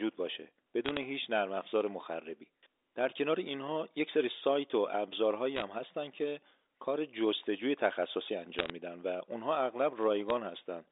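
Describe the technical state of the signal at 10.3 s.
Bit errors on the digital phone line at 10.30 s flipped a few bits in a short burst, corrupting individual samples and producing a brief, sharp tick over the speech.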